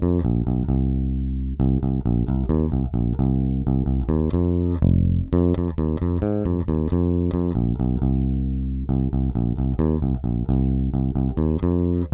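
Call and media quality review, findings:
No faults found in call audio.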